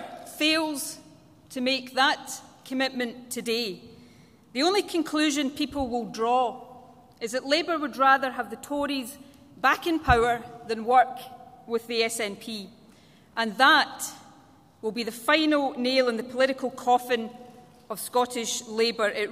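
No technical faults are audible anywhere in this audio.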